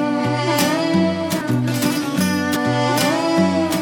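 A brief smeared blip at 1.40 s and again at 2.55 s, each time the sound jumping ahead about a fifth of a second: compressed frames skipped, fitting whole frames of about 26 ms.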